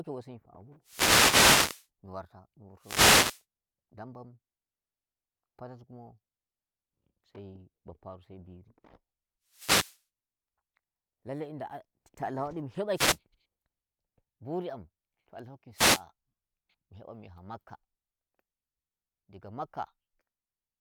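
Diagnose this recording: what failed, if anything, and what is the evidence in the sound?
Wireless microphone noise hits break into the speech at 0.83–1.88, 2.79–3.44, 9.47–10.02, 12.93–13.18 and 15.72–16.04 s. Each is a short swish of static. The fault sits in the analogue FM radio link. Reflections cancel the signal, and receiver noise rises over the voice.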